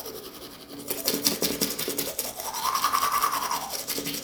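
No technical fault can be heard anywhere in the recording; the signal holds steady with nothing in it that points to a problem in capture, transmission or playback.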